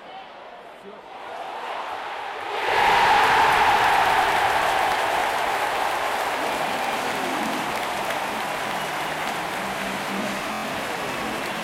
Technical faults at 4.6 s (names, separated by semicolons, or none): none